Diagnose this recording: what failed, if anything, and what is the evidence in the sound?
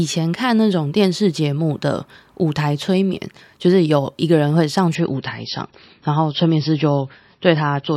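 At the network stage, the adaptive stream dropped to a lower bitrate from 4.95 s to the end. The speech abruptly loses everything above 5.8 kHz with no gap and gains codec smearing, which fits a switch from about 128 to 24 kbit/s MP3.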